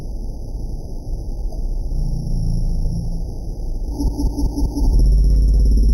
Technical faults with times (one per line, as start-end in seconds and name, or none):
4.08-4.85 repeated frames